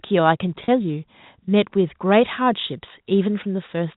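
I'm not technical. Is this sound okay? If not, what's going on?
No. At 0.64 to 0.68 s a brief packet loss with pitch repetition occurs: about 40 ms of speech went missing, and the phone filled it by repeating the last sliver of voice, so you hear a short buzzy hold instead of a silent gap.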